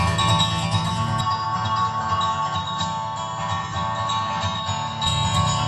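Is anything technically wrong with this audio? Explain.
Yes. From 1.21 to 5.07 s the audio turns duller and boxier, with nothing above 7.5 kHz, a few decibels lower in level and a faint new noise floor, with no gap at the switch. This is likely an input switched to a poorer device.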